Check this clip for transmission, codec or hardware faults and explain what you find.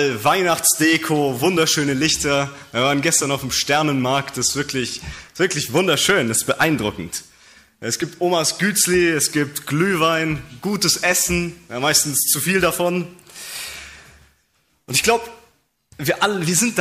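One fault runs through the whole clip: hard clipping. The signal is driven about 7 dB beyond what some stage in the chain can pass, so each peak that crosses the ceiling is sliced flat. Only a small fraction of samples, around half a percent, actually exceed the limit, so the damage is confined to the loudest moments. Those squared-off tops generate high harmonics, heard as a brief harsh crackle on every peak.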